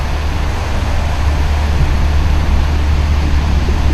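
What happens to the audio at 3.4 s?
Nothing goes wrong at 3.4 s; the audio plays through that moment intact, with no dropout, click or distortion.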